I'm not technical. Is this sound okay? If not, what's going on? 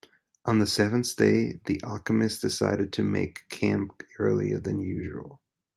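Yes, this recording sounds fine; nothing is wrong here.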